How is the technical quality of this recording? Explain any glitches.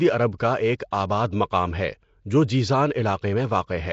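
The recording is speech with plainly audible codec damage throughout and one brief smear on an attack.

Throughout, the speech has a rough, hissy halo and a watery smear, most likely from Nellymoser compression at a bitrate that fits 32 kbps. Quiet bands are replaced by noise, and a spectrogram shows nothing above 7.7 kHz.

At 0.91 s, between "کا ایک" and "آباد مقام ہے جو", there is pre-echo. Block quantisation noise spills about 16 ms ahead of a sharp onset, so a short hiss precedes it. The waveform shows a low fuzzy smear just before the attack.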